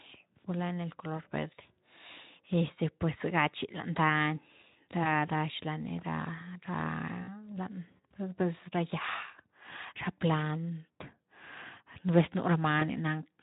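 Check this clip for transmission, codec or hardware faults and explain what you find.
Three brief dropouts in the speech show VoIP packet loss concealed by the speech codec, heard through a lightly coloured Speex-coded line. At 5.03 to 5.12 s, 7.23 to 7.28 s, and 12.80 to 12.83 s (just after "nú vez"), the sound smears into a short buzzy tone or coloured noise that fades. About 20 ms of audio was lost at the first and third points and 40 ms at the second. The decoder filled each gap by extending the last pitch and spectral shape at falling gain, and because each frame builds on the previous one, the smearing lingers for tens of milliseconds or more past the gap.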